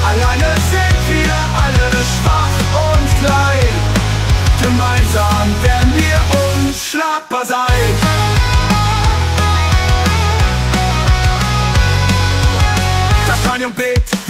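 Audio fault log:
No faults found in the recording; nothing to log.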